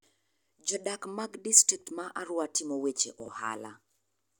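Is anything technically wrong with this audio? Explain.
Yes, at 3.2 to 3.28 s, right after "timo weche", there's a spot of chunks out of order. A 20 ms chunk lands three chunks late, so the sound briefly jumbles at the hard joins where the pieces were spliced in the wrong sequence.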